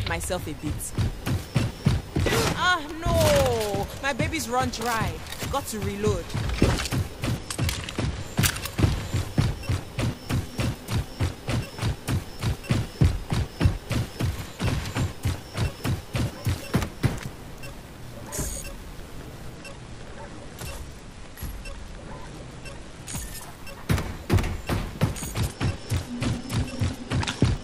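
Three Bluetooth SBC bit pool drops, at 7.36 to 8.26 s, 19.55 to 23.33 s and 25.39 s to the end, dull the treble and add gritty quantisation noise, which points to the bit pool falling to around 13. Unlike a plain low-pass, the grit also rises.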